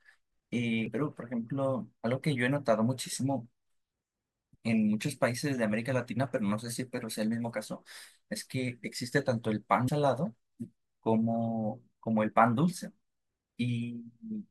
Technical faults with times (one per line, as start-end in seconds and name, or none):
0.86 damaged data in a compressed stream
9.87 damaged data in a compressed stream